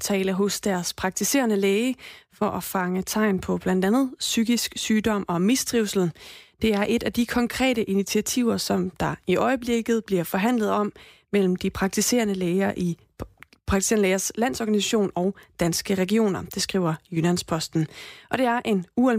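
No technical faults can be heard anywhere in the speech recording; the signal stays intact and continuous throughout.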